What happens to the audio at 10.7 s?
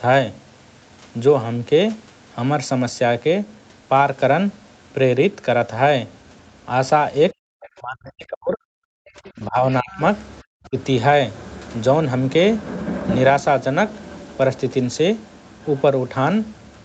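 The speech collapses from 10.47 to 10.76 s, sinking by around 40 dB. This is likely speech suppressed in double talk: the echo canceller couldn't separate the talker from loudspeaker echo and attenuated both. The waveform pinches nearly flat, leaving a near-blank gap on the spectrogram.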